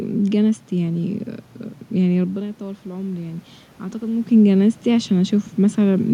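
Speech, with automatic gain rising from 2.25 to 4.24 s. After the input drops by about 12 dB, as the talker moves back around 2 s, the control lifts its gain by about 4 dB. On the waveform, voice and room noise swell together over those two seconds.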